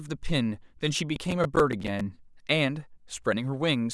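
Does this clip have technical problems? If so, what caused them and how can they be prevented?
Yes. Processor overload crackle runs from 1.16 to 2.01 s, a gritty, tearing crackle laid over the speech. The processor fell behind and missed a string of playback deadlines, about ten of them, which fits buffers of around 10 ms each. Each time a buffer wasn't ready, a stale piece of earlier audio was replayed with hard edges, and the clicks stop once the load eases. Prevent it by enlarging the buffer or reducing processing load during recording and playback.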